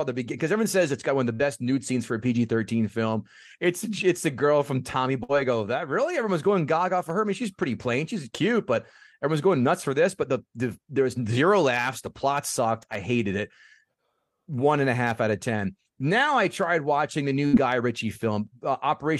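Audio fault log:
1.33–1.42 s, burst of packet loss: after "got one of the", about 60 ms of audio is lost. The receiver extends the last sound for about 59 ms, fading it, then jumps ahead to "nude scenes for a".
5.23–5.32 s, burst of packet loss: a 60 ms gap, concealed for about 54 ms by a decaying repeat of the preceding sound, right before "I go that really".
17.47–17.56 s, burst of packet loss: after "I tried watching the", about 62 ms of fading concealment covers 60 ms of lost audio, leaving a skip.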